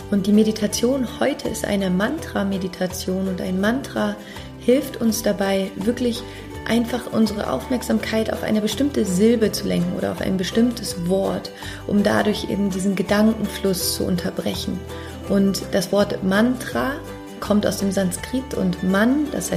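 No technical faults can be heard anywhere in this clip.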